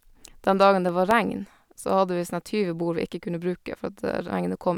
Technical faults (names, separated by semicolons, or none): CD scratch ticks